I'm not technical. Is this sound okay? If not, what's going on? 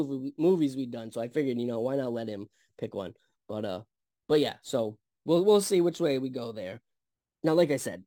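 No. Throughout, crude rate conversion copied the nearest samples with no smoothing, leaving a gritty, fizzy buzz riding on the louder and brighter parts of the speech.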